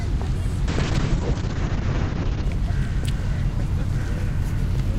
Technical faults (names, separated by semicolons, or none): call bitrate drop